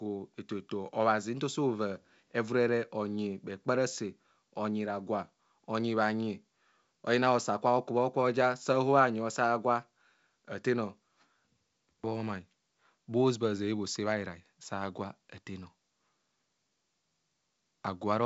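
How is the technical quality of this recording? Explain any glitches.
There are no glitches or technical faults to point out in this speech recording. It has the sound of G.722 wideband telephone coding, consistent with its 64 kbit/s mode, with nothing above about 7.7 kHz and at most faint coding traces.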